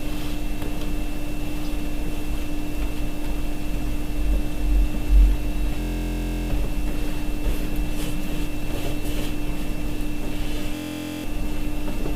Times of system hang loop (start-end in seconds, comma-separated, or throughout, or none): 5.80-6.50, 10.75-11.24